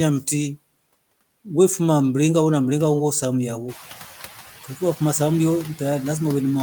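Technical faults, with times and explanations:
Throughout: noise suppressor artifacts. The background is pulled down by about 9 dB in the gaps and swells back under the speech. That pumping sets it apart from the room noise itself, which steps up around 3.5 s yet stays about 17 dB below the speech.
4.64–5.0 s: speech cut by the noise suppressor. Roughly a tenth of a second of the speech itself sinks by up to about 8 dB, sounding swallowed. Unlike the pumping background, here the suppressor mistook quiet speech energy for noise and turned it down.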